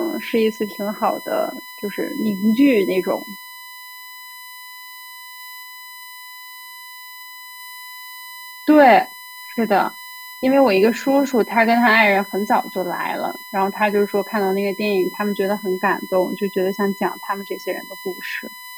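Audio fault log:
Throughout, USB whine. A steady tone sits under the speech at 1 kHz, with its strongest part at 2 kHz, roughly 20 dB below the signal. The bus draws current in 1 ms frames. That pulsing leaks through power or ground into the audio path.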